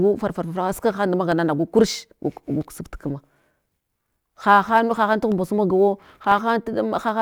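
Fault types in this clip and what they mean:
Periodic USB or driver dropouts: something stalls the audio path at a fixed one-second interval, and each time a tiny slice of signal, roughly half a millisecond, is replaced by silence. Between 1.32 and 6.32 s this gives about seven evenly spaced ticks in the speech. On a waveform each appears as a brief notch dropping to near silence; on a spectrogram, as thin vertical broadband lines at regular spacing, visible only where speech energy is present.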